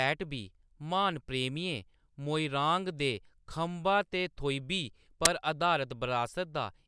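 File tags played as audio appear at 5.25 s, just after "ते थोईबी": a very brief burst of very loud white noise with hard edges cuts into the speech. The player has treated a block of embedded tag data, here compressed cover-picture bytes, as if it were sample values. Because compressed data looks statistically random, the samples swing wildly, giving loud, flat static that starts and stops abruptly rather than fading.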